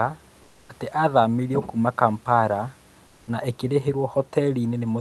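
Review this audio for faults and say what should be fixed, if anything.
Comfort noise in place of the background at 0.43–0.69 s and 3.07–3.27 s: in each pause the real room sound gives way to flat synthetic noise, about 4 dB and about 1 dB quieter, likely from Opus discontinuous transmission. Disable DTX on the sender, or raise its speech-detection sensitivity, so pauses keep the true background.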